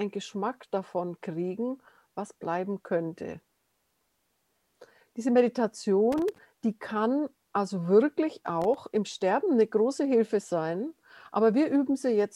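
From 6.12 to 6.38 s and again from 8.61 to 8.78 s, loose connector crackle breaks in: a worn contact repeatedly losing and regaining the signal. The bursts are irregular and scratchy, unlike the evenly spaced clicks of a digital timing fault.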